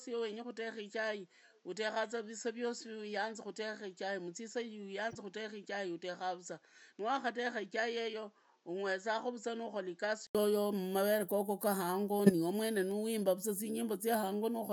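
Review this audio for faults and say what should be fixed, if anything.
From 0.0 to 10.35 s the speech is dull and boxy, likely because the input had switched to a poorer device. The spectrogram shows nothing above 7.8 kHz, a noise floor about 40 dB below the signal, and a level about 5 dB lower. An 80 ms silent gap appears at 10.35 s, where the full band and level return. Lock the recording to one input device and disable automatic switching during capture.

A corrupt frame decoded at 5.10 to 5.15 s and again at 12.26 to 12.31 s. Flipped bits made the decoder put energy at the wrong frequencies, producing a brief chirp or burst. The first is faint, near -35 dBFS, and spans a couple of frames. The second is much louder, near -15 dBFS, and spans a few frames. Each shows as a short vertical smear on the spectrogram. Add error detection so damaged frames are concealed rather than decoded.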